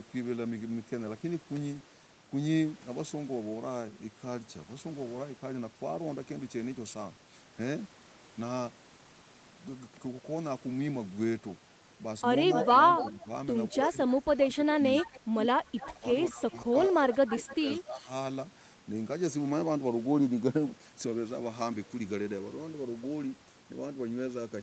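From 12.53 to 13.26 s, an echo leak lets a copy of the speech return about 264 ms late, at about 5 dB below it. The far end's echo canceller likely missed its loudspeaker pickup. From 12.64 to 18.08 s, speech is suppressed in double talk, likely because the canceller ducked both talkers. The voice drops by up to about 20 dB, for roughly three seconds in total. Fainter echo returns at 14.96 to 15.94 s (272 ms, about 15 dB down) and 17.28 to 17.56 s (279 ms, about 10 dB down).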